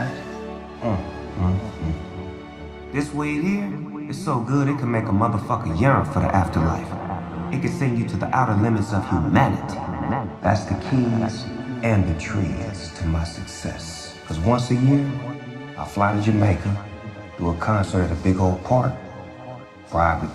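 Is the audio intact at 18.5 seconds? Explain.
Yes, at 18.5 seconds the audio plays through intact, with no dropout, click, distortion or other fault to be heard at that point.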